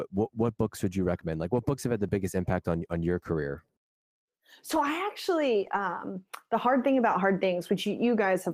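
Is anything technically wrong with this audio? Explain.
Yes, there are four spots of lost packet rebuilt from error correction, at 3.17 s just after "impact on on your", 4.71 to 4.77 s, 5.61 to 5.75 s, and 7.11 s after "the hard thing". Lost packets were filled from low-bitrate copies carried in the following ones, so there's no gap, just short rough, noisy patches. The longest runs for 80 ms, which fits about four packets in a row.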